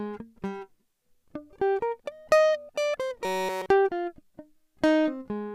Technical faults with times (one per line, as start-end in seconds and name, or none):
3.25-3.70 robotic sound from repeated short buffers